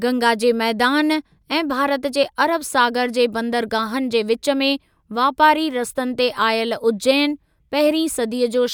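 A speech recording with nothing technically wrong with it.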